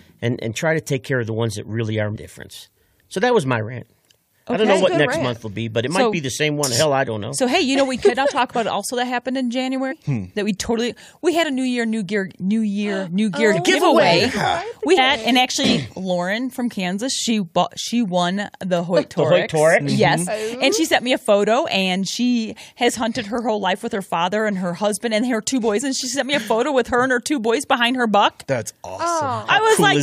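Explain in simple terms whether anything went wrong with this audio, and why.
Two brief glitches, at 2.15 to 2.17 s and 9.90 to 9.93 s, come from damaged data in a compressed stream. Corrupted bytes made the decoder misread those frames and hunt for its place, giving a short chirp, squawk, click or brief hole in the sound.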